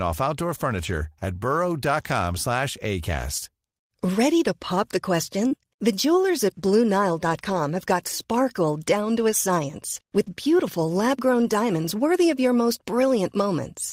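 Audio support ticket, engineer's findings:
Lost packet rebuilt from error correction, 0.75–1.05 s: Opus in-band FEC copies replaced about 160 ms of lost speech. No gap, but low-bitrate frames sound rougher, noisier.

Scattered short gaps, 5.47–11.54 s: a few late or lost packets, about 80 ms missing, concealed by extending prior audio. Brief ticks, smears, hiccups, longest around 40 ms.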